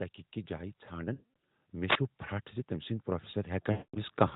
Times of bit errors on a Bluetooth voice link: none

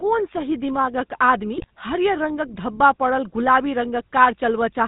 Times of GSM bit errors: 1.56-1.65

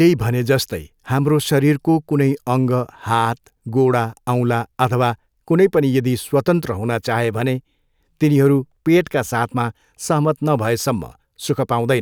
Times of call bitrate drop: none

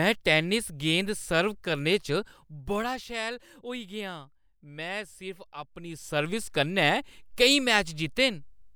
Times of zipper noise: 2.16-3.20, 5.76-6.52

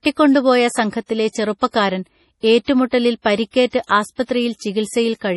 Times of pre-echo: 2.64-2.68, 3.22-3.26, 3.85-3.89, 4.23-4.29, 4.58-4.61

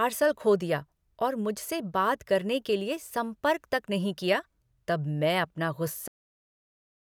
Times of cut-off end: 6.08-7.04

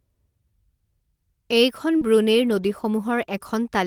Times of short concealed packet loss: 1.97-2.03

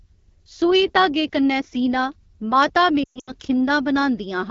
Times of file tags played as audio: none

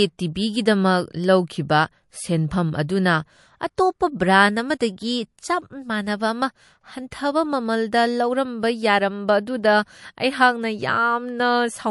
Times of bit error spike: none

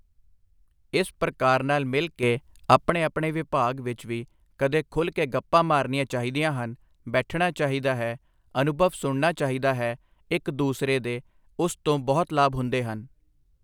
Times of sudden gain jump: 2.23-2.90

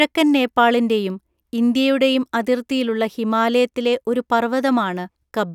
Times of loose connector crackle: none

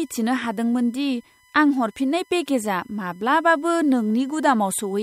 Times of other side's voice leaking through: none

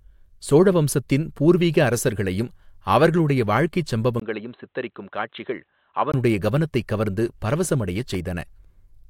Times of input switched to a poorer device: 4.20-6.14

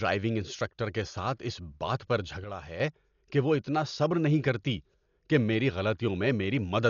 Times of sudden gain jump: 2.44-2.80

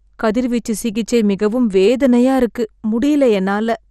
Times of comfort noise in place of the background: none

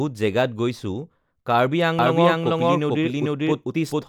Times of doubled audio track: 1.99-4.09

